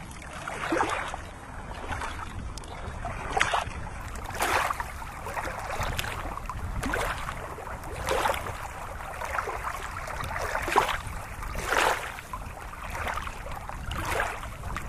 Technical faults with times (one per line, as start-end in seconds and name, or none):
0.00-4.00 adaptive stream starting at a low bitrate